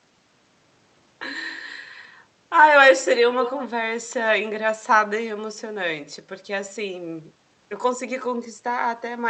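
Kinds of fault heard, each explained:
Echo leak: The likely cause is a far-end loudspeaker whose echo canceller failed to remove everything its microphone picked up, so part of the speech was sent back down the call as a delayed copy. Here it shows as a short scrap from 3.4 to 3.65 s, trailing the original by 191 ms. It is strong, only a little quieter than the speech, which gives that moment a brief doubled, smeared quality.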